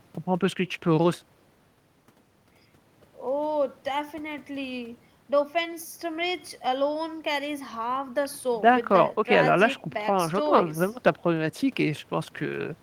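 No technical faults are audible anywhere in the speech recording.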